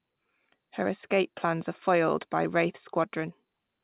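Nothing stood out on listening to this speech, which arrives over a call link that carries nothing above 4 kHz.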